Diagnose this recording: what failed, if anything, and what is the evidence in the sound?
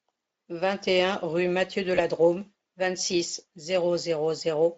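Network stage, specifically VoIP packet loss concealed by the speech codec. Around 1.95 to 2.01 s the speech briefly smears into a short stretched sound that sags in level, then takes a moment to firm up again. That's the decoder filling a gap by repeating its last pitch and filter with falling gain. The gap is about 20 ms, which fits a single lost frame, and since each frame leans on the previous one, the recovery trails a little after. The Speex codec itself sounds like a fairly high setting with only light colouring.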